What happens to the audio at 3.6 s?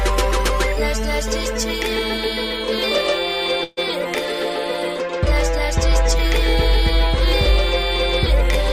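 At 3.63 s the sound stops moving forward and the last fragment is stretched into a short buzzing hiss that fades, lasting until 3.79 s and never dropping to silence. The audio then resumes exactly where it left off, with nothing skipped, but now runs about 136 ms later than before. This is a call audio freeze, likely caused by packets held up in transit until the jitter buffer emptied, so the receiver filled the wait itself.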